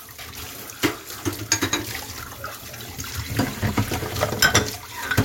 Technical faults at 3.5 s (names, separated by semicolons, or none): none